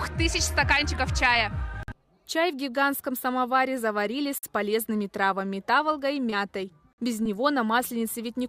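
At 1.83 s the sound stops dead for 50 ms, then resumes, and the same hard-edged hole recurs at 4.38 s and 6.93 s. This is a gap between chunks: the audio was delivered in blocks of 2.5 s, and silence was inserted at each join, the kind of thing a player that starts each block late or a codec adding padding would produce. Nothing is missing from the material itself; it is simply interrupted at regular 2.5 s spacing.

At 6.30 s there is a short concealed packet loss: about 20 ms of audio failed to arrive in time, and the decoder bridged roughly 19 ms by extending the preceding sound before crossfading back into the real signal. A second one at 7.23 s covers a similar 20 ms hole with about 22 ms of fill. Each is heard as a brief smear or wobble rather than a silent dropout.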